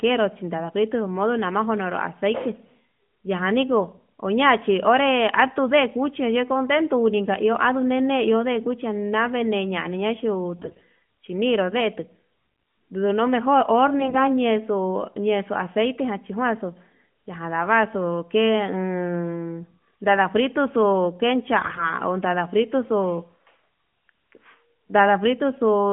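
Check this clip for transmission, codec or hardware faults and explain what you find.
Three short bursts of AMR bit errors stand out, all on an AMR narrowband mobile link whose 150 Hz to 3.4 kHz band and light coding character fit the 12.2 kbps mode.

AMR bit errors occur from 10.56 to 10.84 s, 14.00 to 14.21 s and 21.62 to 21.92 s. Around one bit in ten of the weakly protected frame data is corrupted while the protected core still checks out, so the decoder accepts bad frames. Misplaced excitation pulses and skewed pitch, gain and spectral values make each stretch sound hoarse, scratchy and gargly, with the pitch and level roughly held.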